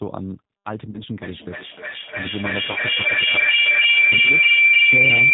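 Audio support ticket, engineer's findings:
G.729 codec, full clip. Speech narrowband, nothing above 4 kHz, faintly rough and synthetic, the plainly audible signature of an 8 kbit/s G.729A path. Speech rebuilt from a vocal-tract filter, pitch predictor and sparse pulses, so fine detail and air are lost.

VoIP packet loss concealed by the speech codec, 0.90 to 1.01 s and 2.72 to 2.79 s. Each gap of 40 ms, which fits two lost 20 ms packets. Decoder extrapolated the last pitch and filter at falling gain, giving a brief stretched, fading stretch. Since each frame builds on the previous one, speech stays weak and distorted past the gap before it recovers.

Feedback howl, 1.18 s to end. Tone around 2 kHz builds until it peaks about 13 dB above the speech, loop delay roughly a third of a second. Two endpoints in one room on the same call. The mic-to-speaker loop gains level each pass and narrows onto the frequency it favours. 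It persists until the loop is broken, for example by muting one device.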